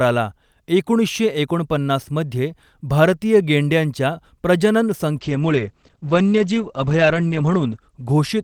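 From 5.17 s to the end, a call bitrate drop takes the encoder from 48 to 12 kbps, bottoming out for 2.35 s, and narrows the band from 20 kHz to 8 kHz. Speech turns muffled and watery but stays continuous, unlike packet loss, which leaves gaps.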